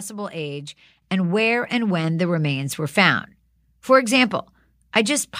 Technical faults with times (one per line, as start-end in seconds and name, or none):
1.02 microphone volume stepped up